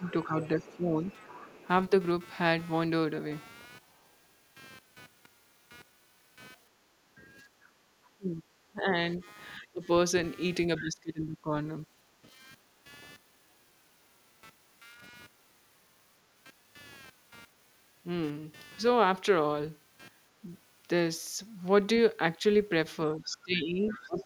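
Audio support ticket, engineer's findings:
Computer activity noise: throughout, buzz pulsing roughly 200 times a second, about 30 dB under speech. It tracks machine load, not the audio, unlike steady mains hum.

Speech suppressed in double talk: 0.0–1.91 s, 8.17–11.51 s, 22.39–24.24 s. The talker dips, worst around 25 dB near 8–11 s, likely the echo canceller clamping during overlapping talk.

Other side's voice leaking through: 0.05–1.68 s, 23.31–24.07 s. A faint second voice about 20–25 dB below, likely uncancelled loudspeaker echo. It adds sound rather than removing it.

Background gated by the echo canceller: 7.15–7.89 s, 12.23–12.47 s, 14.85–15.0 s. Room tone drops up to about 15 dB, then recovers.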